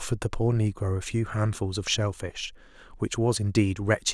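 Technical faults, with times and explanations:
There are no technical faults in this speech, so there are no times or explanations to give.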